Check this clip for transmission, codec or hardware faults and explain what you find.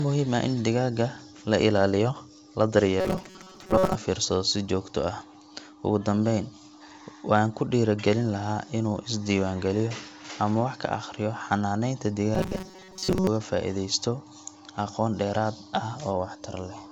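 The clip has two bursts of robotic sound from repeated short buffers. The first runs from 3.00 to 3.95 s, between "la ilaaliyo la" and "fiirsado si joogto ah". The second runs from 12.35 to 13.28 s. Both have the same cause. Audio likely arrived too slowly, so the receiver kept replaying a tiny chunk instead. Most of the real speech in those spans is lost. The repeats impose a rigid metallic buzz at 188 Hz, which points to buffers of about 5.3 ms. The wideband telephone coding underneath keeps the band clear, with little trace of its own.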